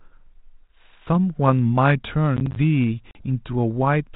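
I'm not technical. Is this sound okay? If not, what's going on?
No. There are two separate problems, each lasting a fraction of a second.

From 2.37 to 2.56 s you hear processor overload crackle. The computer handling the sound fell behind and missed several of its tiny deadlines in a row. Each miss left a very short gap of silence, roughly a hundredth of a second long. Strung together, those gaps make a brief gritty, crackling tear in the speech.

From 3.11 to 3.22 s there is packet loss on an ADPCM call. This recording passed through a phone-style digital system. About 40 milliseconds of sound went missing in transit and was replaced by silence, leaving a sharp-edged hole. The receiving end then briefly lost track of the sound's level, so the speech returns slightly distorted before settling.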